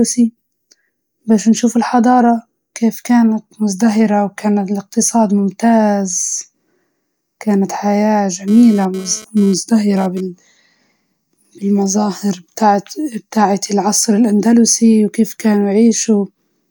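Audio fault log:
8.48 to 10.21 s, GSM phone buzz: a hard, raspy buzz at about 217 Hz, thick with harmonics, sits about 22 dB below the speech for roughly 1.7 s and then stops, with no relation to what is being said. A nearby 2G phone was transmitting in pulsed bursts at that rate during a data transfer, and the audio circuitry rectified the radio pulses into this audible tone.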